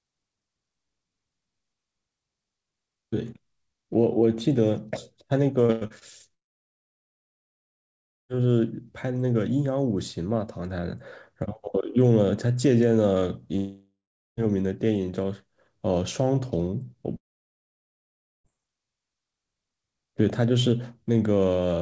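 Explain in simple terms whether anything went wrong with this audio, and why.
Between 5.66 and 6.04 s, the call's data packets kept going missing, causing repeated packet loss (robotic sound). Four short holes were patched by stretching the last bit of sound, so almost half of that moment sounds choppy and mechanical.

At 6.34–8.31 s, 13.56–14.40 s and 17.16–18.47 s, the audio cuts out, most likely from a long network dropout. Each gap begins with a fading buzz before going quiet, and the missing part is simply skipped when the sound returns. The silences last roughly 1.9, 0.4 and 1.2 seconds. The call connection itself, which carries nothing above 8 kHz, is not at fault.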